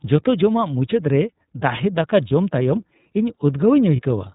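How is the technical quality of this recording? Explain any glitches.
The recording is limited throughout by a narrowband speech codec and has two brief dropouts.

An iLBC codec carries the whole clip, most likely in its 30 ms frame mode at about 13 kbps. It discards everything above 4 kHz and rebuilds each frame's excitation independently, so the speech sounds dull, slightly rough and synthetic, with clear codec damage.

Lost iLBC frames occur at 2.28 to 2.31 s and 3.96 to 4.02 s, each a single missing packet. The decoder filled each gap by repeating the last pitch cycle blended with noise, giving a short held, buzzy vowel before the speech snaps back cleanly.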